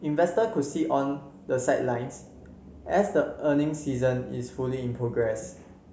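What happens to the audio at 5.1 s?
At 5.1 s the speech carries on intact, with no dropout, click, distortion or other fault at that point.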